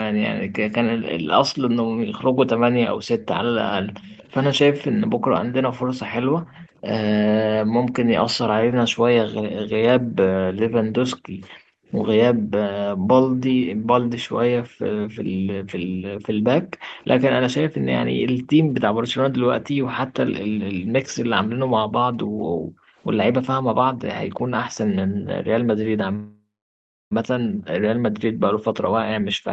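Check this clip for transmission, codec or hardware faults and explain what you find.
Four kinds of fault are present in this speech clip, carried over a call path whose audio stops at 8 kHz.

Background gated by the echo canceller runs from 1.47 s to the end. The canceller pulls the microphone down hard while the far side plays. The room sound dips, at its deepest by about 40 dB, then returns.

An echo leak appears at 1.76 to 1.81 s, 4.04 to 6.66 s and 13.49 to 13.56 s. A delayed copy of the speech trails 234 ms behind. It is very quiet at first and louder by 13.49 s. The likely cause is a loudspeaker echo the canceller did not fully remove.

A call audio freeze runs from 26.15 to 27.13 s. Delayed packets likely starve the jitter buffer. The last sound is stretched into a fading buzz, then about 0.68 s of silence. The speech then resumes where it stopped, so nothing is lost.

A jitter buffer speed-up runs from 28.74 to 29.25 s. 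The buffer has built up too much audio and trims short pitch-period pieces to catch up. About a tenth of a second is removed. The speech plays at 118% speed with unchanged pitch and sounds hurried.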